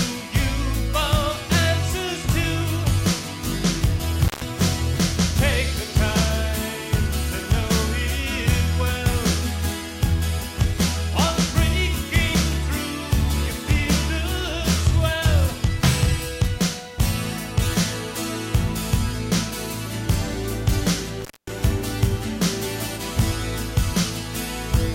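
At 4.25 s and again at 21.21 s, the sound drops out abruptly with crackle at both edges, about 140 ms and about 225 ms long, leaving faint hiss. This is intermittent contact: a loose plug or cable briefly opening the signal path.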